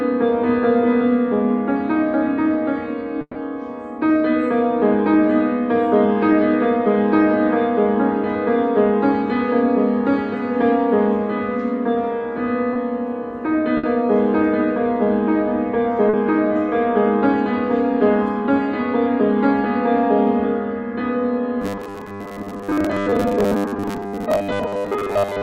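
Burst of packet loss occurs at 3.21 to 3.37 s and 13.77 to 13.85 s. The receiver extends the last sound, fading it for 140 ms and then 60 ms, with about 50 ms of silence in the first gap, before resuming later with that stretch of audio missing. Short concealed packet loss appears at 12.73 to 12.77 s and 16.09 to 16.15 s. Gaps of 20 ms and 40 ms are filled by continuing the preceding sound and blending back, heard as a brief smear or wobble. Robotic sound from repeated short buffers runs from 21.62 s to the end at 25.42 s. It is a rigid, metallic 100 Hz buzz, likely from audio arriving too seldom, so a repeated chunk fitting a 10 ms buffer replaces most of the real signal.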